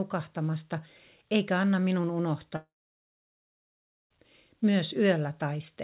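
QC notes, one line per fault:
2.56–4.12 s, long network dropout: the audio stops for about 1.54 s. The receiver carries the last sound on as a brief fading buzz for roughly a tenth of a second, then leaves about 1.42 s of near-silence before the audio resumes with the lost stretch simply gone. The likely cause is packets never arriving. On the waveform the envelope collapses to a flat line. On the spectrogram, with the narrowband content already stopping at 4 kHz, the band goes dark across the gap.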